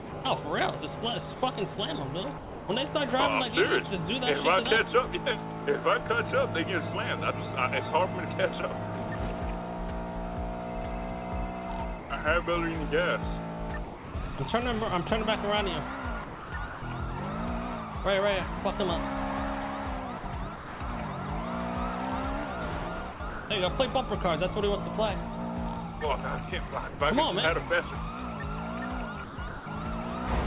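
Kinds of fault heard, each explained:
sound chopped by the voice detector: Sound flickers with short patches of flat synthetic hiss, from the start to 2.68 s and later, likely from detector switching replacing sound with comfort noise.
sound dropped by the voice detector: At 12.0 s for 100 ms and 13.84 s for 300 ms, sound gives way to steady noise, likely the detector mistaking it for background.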